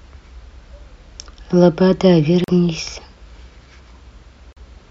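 At 2.44 s and again at 4.53 s the speech drops out completely for about 40 ms each time, ending at 2.48 s and 4.57 s. These are likely Bluetooth dropouts, with packets failing to reach the headphones in time, and the length fits roughly two lost packets. Unlike a buffer stall, the speech does not pause and pick up where it stopped. It resumes further along, so the missing slice is simply gone.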